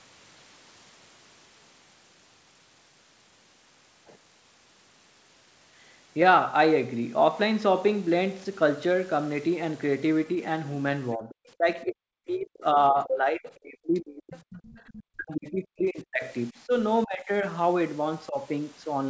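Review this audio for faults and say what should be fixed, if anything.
Speech suppressed in double talk: the echo canceller likely could not tell the near talker apart from loudspeaker echo while both sides spoke, so it turned everything down. The speech dips and breaks up from 11.15 to 14.61 s and again from 15.06 to 16.72 s, falling by as much as about 40 dB, with lighter dips from 17.05 to 17.29 s (about 15 dB) and 18.28 to 18.37 s (about 10 dB). Preventing it needs better double-talk detection, so the suppressor holds back while the near talker is active.

The other side's voice leaking through: the echo canceller likely left some of the loudspeaker signal in the microphone path, so the far voice comes through. It appears as a brief scrap from 11.30 to 11.35 s and a longer stretch from 14.32 to 15.03 s, sitting about 25 dB below the talker. Because it is that quiet, it sounds faint and in the background rather than dominant. 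Preventing it needs stronger echo cancellation, with the loudspeaker reference correctly aligned so the canceller can fully converge.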